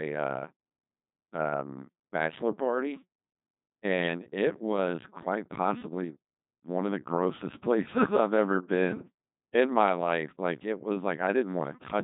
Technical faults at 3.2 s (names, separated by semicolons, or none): Codec 2 vocoder